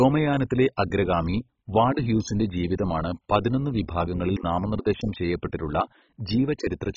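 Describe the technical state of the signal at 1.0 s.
At 1.0 s the speech carries heavy MP2 compression damage, present throughout the clip: the sound is dull, gurgling and granular, pointing to a very low bitrate, likely near 16 kbps, where the encoder switches off upper sub-bands and coarsely quantises the rest. A spectrogram shows nothing above 7.3 kHz, with patchy, flickering blocks below.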